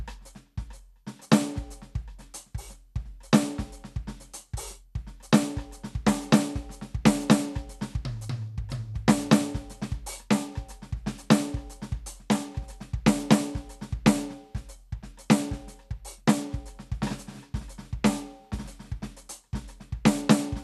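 Throughout the music, the encoder has likely run short of bits under MP2 compression, the kind of starvation that fits a rate near 80 kbps. Layer II divides the spectrum into 32 sub-bands and, lacking bits, drops the top ones entirely, so nothing survives above about 12.2 kHz. The bands still coded are quantised coarsely and switch in and out, leaving a dull, gurgling, granular texture laid over the whole recording from start to finish.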